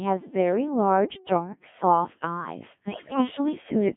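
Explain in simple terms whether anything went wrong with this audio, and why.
Two things went wrong. First, the whole recording passed through a Codec 2 vocoder, a very low-rate digital radio voice system. It doesn't send the actual sound wave. It sends only a rough description: pitch, loudness, whether the sound is voiced, and a broad tone shape. The receiver rebuilds speech from simple tones. Here that rebuilding is heavy-handed, so the speech sounds robotic and buzzy throughout, squeezed into a narrow band from about 150 Hz to 3.5 kHz.

Second, from 2.89 to 3.20 s there are bit errors on digital voice radio, as happens when a signal is weak. Roughly one bit in five arrived flipped. Because each bit in such a compact system controls pitch, level or tone for a whole short slice of sound, that third of a second jumps about in pitch and loudness and turns into warbling, robotic gibberish. 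The length of the burst fits about seven damaged frames.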